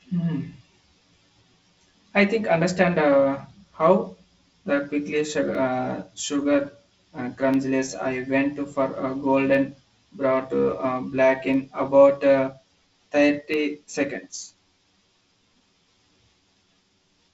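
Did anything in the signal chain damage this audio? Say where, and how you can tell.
Yes. At the driver or buffer stage, one channel runs about 10 ms behind the other, and the mono sum causes channel delay (comb filtering). The speech sounds hollow and phasey. A spectrogram shows fixed notches from around 50 Hz, spaced about 100 Hz apart.

Periodic USB or driver dropouts occur every 2.0 s from 5.55 s to 13.54 s, about five in all. Each loses a fraction of a millisecond, filled with silence, and is heard as a tick. The waveform shows tiny flat gaps, and the spectrogram shows thin vertical lines.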